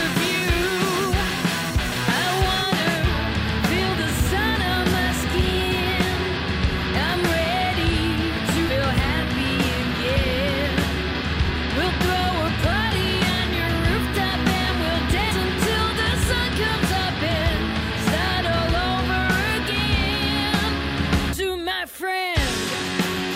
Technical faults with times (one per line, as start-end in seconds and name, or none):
15.31 compressed frames skipped
21.33 compressed frames skipped